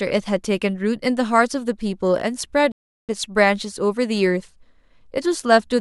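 At 2.72 s the speech stops dead for a rebuffering stall. Silence holds until 3.09 s, about 0.37 s. The player had run out of downloaded audio and waited for more. Speech then resumes exactly where it broke off. Nothing is lost, but the pause adds time.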